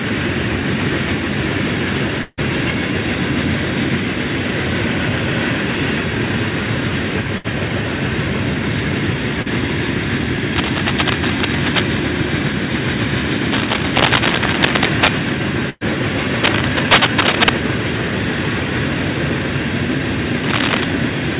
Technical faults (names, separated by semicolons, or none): long network dropout; burst of packet loss; short concealed packet loss; cable scratch noise